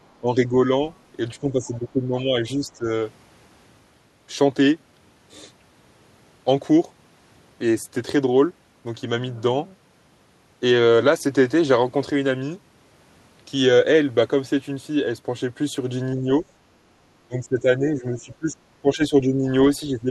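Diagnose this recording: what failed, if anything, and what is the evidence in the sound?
Speech suppressed in double talk, in call processing. The speech drops about 10 dB at 0.21–0.56, 1.41–2.88, 16.16–16.44 and 19.94–20.1 s, and about 15 dB at 17.24–19.46 s. The echo canceller likely turned both talkers down.

The other side's voice leaks through at 1.64–1.78 s. It is faint, roughly 30 dB under the speech. Residual loudspeaker echo likely escaped the canceller.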